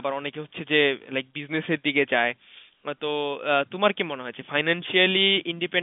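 No technical faults are audible.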